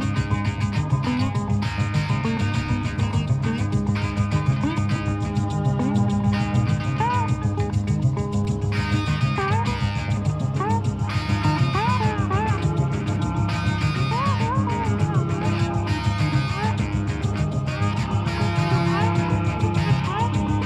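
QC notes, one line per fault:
1.27 s and 8.45 s, DC step: the waveform's zero line jumps by about -28 dBFS, then bleeds away through a 20 Hz high-pass. Each sudden offset shift and its slow return are heard as a brief low thump beneath the unaltered sound.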